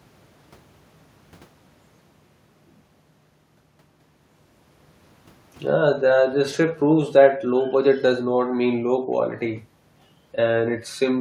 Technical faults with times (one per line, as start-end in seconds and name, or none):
none